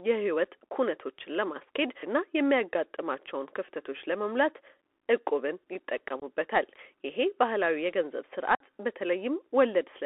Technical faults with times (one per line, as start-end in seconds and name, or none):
0.00-10.05 Bluetooth CVSD headset codec
6.20-6.24 unconcealed Bluetooth headset packet loss
8.55-8.61 unconcealed Bluetooth headset packet loss